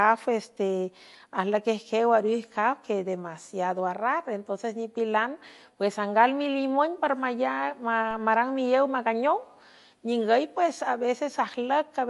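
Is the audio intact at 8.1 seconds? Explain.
No. At 8.11 s there's a DC step: the zero line of the waveform suddenly jumps, the way it does when an input carrying an offset gets switched in. The offset doesn't hold. It drains away along the slow curve of a roughly 5 Hz high-pass, so you hear a single low thump with the speech carrying on untouched through it.

On top of that, the whole stretch, including that moment, has a watery, swirly quality. Nothing comes through above 11.3 kHz, and the s sounds pick up metallic chirps. That's MP3 compression squeezed hard, most likely around 48 kbps, where the encoder chops the treble and lets weak frequency lines blink on and off between frames, smearing the consonant attacks.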